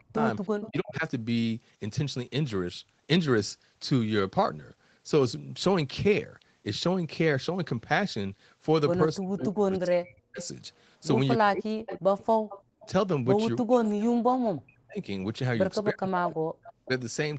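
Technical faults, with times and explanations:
0.0–1.04 s and 9.17–16.9 s, speech suppressed in double talk: the talker's own speech dips by up to about 40 dB, about half a second of it in the first stretch and about 4 s in the second. This is likely the echo canceller mistaking overlapping speech for loudspeaker echo, and it differs from an echo leak because nothing repeats.
0.6–0.7 s, 10.42–12.87 s and 16.07–16.87 s, echo leak: a fainter delayed copy of speech follows it by 317, 336 and 345 ms. It sits about 15 dB below the speech at first and about 20 dB below later. The copy arrives late, which sets it apart from suppression.
12.62–12.8 s, background gated by the echo canceller: the room sound, not the speech, drops by about 38 dB for a moment and then returns as the canceller releases the microphone.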